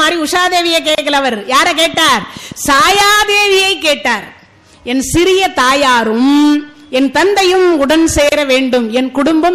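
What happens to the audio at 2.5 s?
A train of clicks runs from 1.94 s to 2.96 s, so 2.5 s falls in the middle of it. Short pulses of much the same shape arrive at a regular rate of about 6.9 per second, roughly seven in all, and they peak at around the level of the sound itself. They come across as steady ticking laid over the audio. The likely source is electrical interference from nearby equipment or a faulty connection or power supply.

Beneath the clicks, MP3 compression damage is plainly audible here, as it is across the whole clip. The sound has a watery, swirling quality and a dulled top end. This happens when the encoder runs short of bits: it cuts the treble above a fixed frequency and drops weak frequency components that flicker on and off from frame to frame. The degree of damage likely points to a low bitrate of around 64 kbps.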